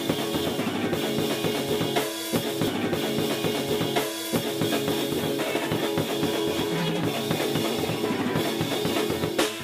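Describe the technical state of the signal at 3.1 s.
At 3.1 s the music is inside a stream segment repeated, 2.67 to 4.67 s: the player queued one segment twice, replaying 2 s after a small jump blip, unlike a stutter's rapid loops.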